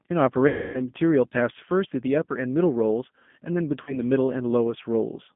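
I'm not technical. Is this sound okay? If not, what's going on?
No, not quite. All the way through, the speech sounds thin, slightly rough and a bit robotic, like an older phone call. It is still easy to understand, but the crispness is missing, because nothing above about 3.5 kHz gets through. That is the G.729 codec, a phone-call compression scheme. Instead of sending the actual sound, it sends a rough recipe for the speaker's voice and rebuilds the speech from it, so some detail is lost.

Twice the speech briefly turns into a buzzy tone or a hiss-like noise that fades away. The first time, from about 0.48 to 0.81 s, lasts about a third of a second. The second, from about 3.83 to 3.97 s, is much shorter. This is VoIP packet loss concealed by the speech codec. Chunks of the call went missing, so the decoder filled the gaps by stretching the last sound it had and letting it die down. The speech also sounds weak or distorted for a moment just after each gap while the decoder catches up.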